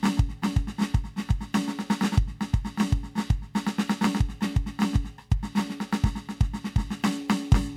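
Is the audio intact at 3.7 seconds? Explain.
Yes, the music plays through 3.7 seconds intact, with no dropout, click or other fault at that moment.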